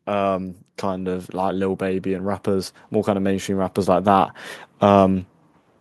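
A speech recording with automatic gain rising from 0.05 s to 5.27 s. Level climbs steadily by about 10 dB. Voice and background noise swell together. The gain control judged the input too quiet and kept raising its gain.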